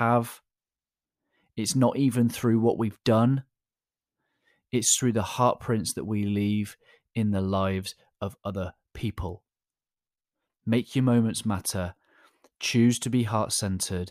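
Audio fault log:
3.04 s pre-echo: after "even through what we've", noise rises about 13 dB for 17 ms ahead of an attack, which fits a 26 ms transform block without short-block switching.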